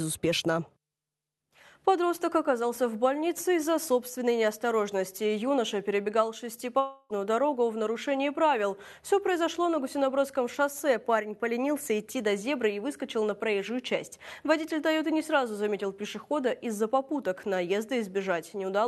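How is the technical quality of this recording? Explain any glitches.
The quality is marked by one clear glitch, a long network dropout, from 6.79 to 7.13 s, most likely caused by audio packets that never reached the receiver in time. With roughly 0.3 s of audio lost, the receiver spent about 303 ms stretching the last received sound into a fading buzz or hiss, which then gave way to a brief silence of about 20 ms before the audio resumed further on, without the missing part. The call codec's band limit, with nothing above about 12 kHz, is present throughout.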